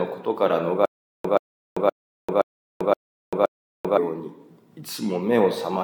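From 0.85 to 3.98 s there's a stutter with silent gaps. A 129 ms burst repeats six times, each time followed by about 391 ms of dead silence, likely a stalled stream retrying.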